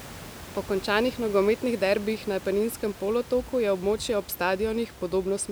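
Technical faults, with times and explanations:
No technical faults can be heard in this speech recording, and the room noise that sits about 18 dB below the voice belongs to the recording space rather than to the signal chain.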